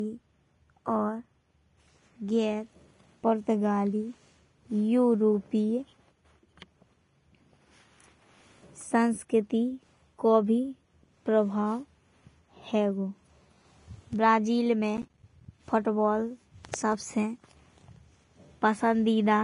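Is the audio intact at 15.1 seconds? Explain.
No. From 14.97 to 15.46 s there's processor overload crackle: the processor keeps missing its deadlines, dropping roughly 10 ms buffers as silence, so you get a gritty burst of tiny gaps. Underneath, nothing exists above 10.5 kHz, which points to low-bitrate audio saved at a high bitrate, likely a low-bitrate source re-encoded as a big MP3 that can't restore what was lost.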